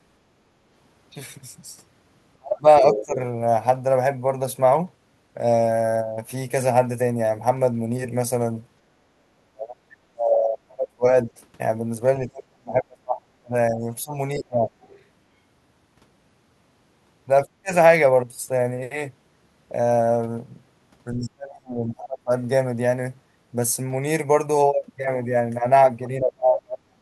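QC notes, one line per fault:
2.38–3.20 s, speech suppressed in double talk: speech dips by roughly 35 dB in pieces, likely an echo canceller ducking both talkers at once rather than a dropout.
2.93–3.05 s, other side's voice leaking through: a brief second voice sits only about 5 dB under the speech, likely echo the canceller failed to remove from the microphone.
9.13–11.31 s, speech suppressed in double talk: about two seconds of chopped, sharply dipped speech, down roughly 40 dB, likely the canceller mistaking overlapping talk for loudspeaker echo.
12.19–14.71 s, speech suppressed in double talk: speech repeatedly ducks by roughly 35 dB over about two seconds, likely from the echo canceller muting during simultaneous talk.
14.81–15.04 s, other side's voice leaking through: a faint scrap of another voice, about 30 dB below the speech, likely residual loudspeaker echo rather than background noise.
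17.44–17.72 s, speech suppressed in double talk: a short, roughly 35 dB dip in the speech, likely echo-canceller suppression during overlap, not a packet-loss gap.
21.14–22.31 s, speech suppressed in double talk: about a second of speech sinking by roughly 30 dB in fragments, likely the canceller turning down both sides.
26.19–27.01 s, speech suppressed in double talk: speech drops by roughly 35 dB in pieces to the end, likely from echo-canceller ducking during double talk.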